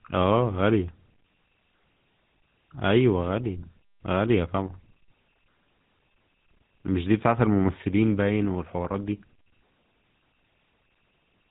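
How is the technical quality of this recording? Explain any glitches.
The quality is clearly limited by codec damage across the whole clip.

GSM full-rate codec, throughout: a vocal-tract model driven by coarse, regularly spaced pulses gives the speech a buzzy, gravelly edge, with nothing above 3.8 kHz, which fits 13 kbps full-rate GSM.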